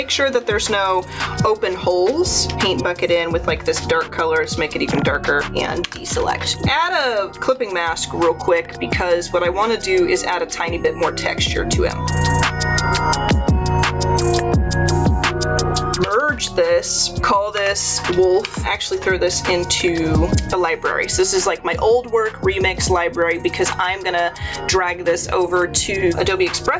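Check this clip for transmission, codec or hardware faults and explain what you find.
One fault runs through the whole clip. Gain pumping, throughout: the gain swings by around 20 dB, pulled down whenever a loud sound arrives. This likely comes from input gain set far too high, with a fast limiter clamping each peak, so loud and quiet parts sit squashed together. Nothing is heard above 8 kHz, consistent with the call microphone processing the signal passed through.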